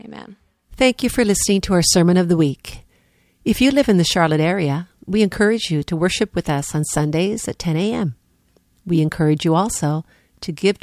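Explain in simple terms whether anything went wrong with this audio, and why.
Nothing went wrong with this audio; there are no faults to point to anywhere in the recording.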